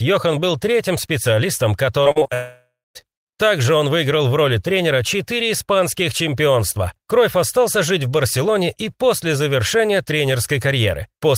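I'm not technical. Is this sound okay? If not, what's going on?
No. Right after "был третьим специалистом", from 2.03 to 2.30 s, the speech turns choppy and robotic. This is repeated packet loss: bits kept going missing and were patched over.

From 2.34 to 2.97 s the sound becomes a fading buzz, then briefly silence. This is a long network dropout, likely the connection stalling, so about 0.6 s of speech is gone.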